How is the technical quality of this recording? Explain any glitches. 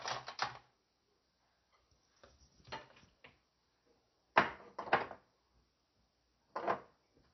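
The quality is poor throughout. The audio sounds dull, watery and swirly for its whole length, with nothing above 5.9 kHz. The likely cause is heavy MP3 compression, consistent with about 32 kbps. Starved of bits, the encoder cut the treble and let weak frequency lines flicker between frames.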